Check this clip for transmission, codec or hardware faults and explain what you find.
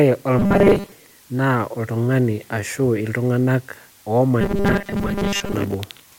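Two faults are present: a constant hiss from low bit depth with dither across the whole speech clip, and two bursts of robotic sound from repeated short buffers.

Low bit depth with dither runs from start to end. The audio has been reduced to 8 bits, with random dither added before rounding, so the rounding error becomes even white noise about 30 dB below the signal. It sounds like a steady, level hiss under the speech. Without dither, the same 8 bits would give gritty distortion that rises and falls with the speech. Here the hiss stays constant and the speech itself stays clean.

Robotic sound from repeated short buffers appears from 0.39 to 0.92 s and again from 4.41 to 5.54 s. In both stretches the speech becomes a rigid, metallic buzz locked at 200 Hz, while still roughly tracing the speech. The likely cause is audio arriving too seldom, with the playback filling the gaps by looping 5 ms slices and skipping most of the real audio. 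The fixed 200 Hz pitch separates this from codec warble, which wanders instead of holding one tone.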